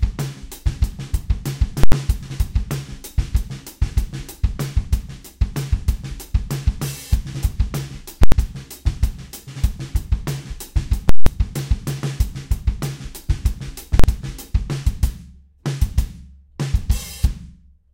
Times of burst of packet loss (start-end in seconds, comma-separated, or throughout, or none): none